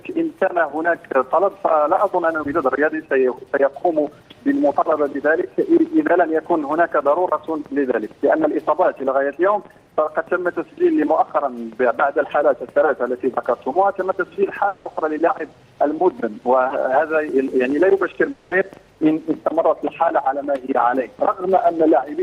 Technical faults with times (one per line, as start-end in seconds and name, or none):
14.67-14.87 long network dropout
18.31-18.53 long network dropout